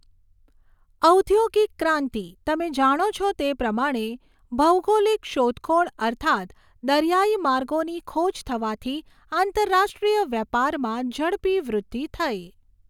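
No technical faults occur at any point in the speech.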